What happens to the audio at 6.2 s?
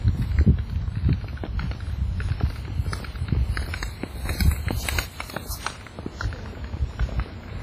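At 6.2 s the audio shows the same heavy WMA compression damage present across the whole clip: ringing, washy smearing and a hiss that swells and fades with the signal. Long transform blocks spread quantisation noise over tens of milliseconds, and weak components are zeroed. Nothing is present above 15.2 kHz, which fits a low bitrate around 24 kbps in a WMA encoder as the likely cause.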